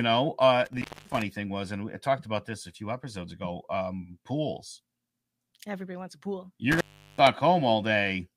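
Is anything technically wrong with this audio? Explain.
Yes, there's an intermittent contact fault, twice. From 0.65 to 1.22 s, just before "thing was and I", the speech drops out for about 240 ms, and from 6.72 to 7.27 s, right after "wants a pool", it goes for about 375 ms. A loose plug or cable briefly opens the signal path, so you get crackle as the contact breaks and remakes, with only faint hiss in the gap.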